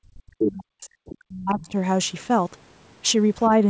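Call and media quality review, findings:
Speech suppressed in double talk, 0.01–1.75 s. Likely cause: echo canceller unable to separate near-end talker from loudspeaker echo during simultaneous talk, attenuating both. Symptom: near-end speech dips across about one and a half seconds of that window, deepest drop about 40 dB. Consistent with suppressor clamping down while far end active.

Other side's voice leaking through, three bursts: 0.40–0.64 s at about −5 dB relative to speech, 1.10–1.14 s and 1.30–1.67 s both at about −20 dB. Likely residual echo passes the canceller. The first burst is nearly as loud as the talker. The later two are faint scraps underneath. All fall inside the double-talk window, and all sit in the same 8 kHz band as the rest of the audio, which fits a G.722 wideband call path.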